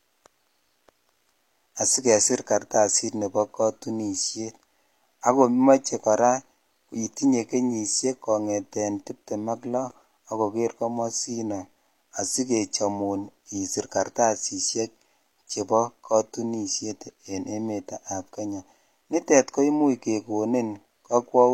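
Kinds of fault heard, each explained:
Pre-echo: this comes from a transform codec working in blocks. Its quantisation noise gets spread across the whole block, so when a sharp attack lands late in one, noise sized for the loud part also leaks into the quiet just before it. In this speech clip it shows up at about 5.84 s as a short hiss smeared roughly 12 ms ahead of an onset, softening that attack.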